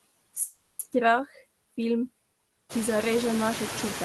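Speech clip with noise suppressor artifacts throughout: the suppressor pulls steady background noise down by about 17 dB frame by frame, so the residue pumps between and under the words. This is most evident once the room noise rises around 2.5 s. From 0.43 to 0.81 s there is a call audio freeze: the last sound is stretched into a fading buzz or hiss for about 360 ms, with no silence and nothing lost. The audio then resumes where it stopped, which points to a likely jitter buffer underrun after delayed packets.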